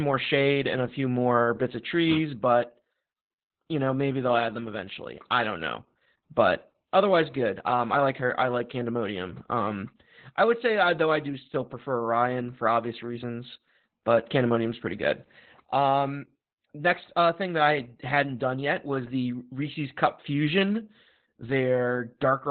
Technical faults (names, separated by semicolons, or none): Opus voice compression